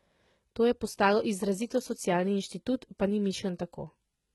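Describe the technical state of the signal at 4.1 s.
At 4.1 s the speech has a gritty, metallic treble, with s sounds coming out lispy, and nothing at all above about 11.8 kHz. The same heavy HE-AAC compression damage runs through the whole clip. The likely cause is a low-bitrate HE-AAC encode, consistent with roughly 16 kbps: the upper band is rebuilt by spectral band replication from copied lower bands under a coarse envelope, so its harmonics no longer match the true ones.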